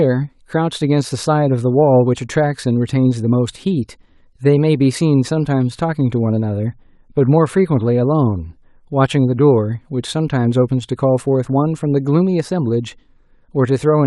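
Listening through the speech, nothing stood out as a technical fault at any point.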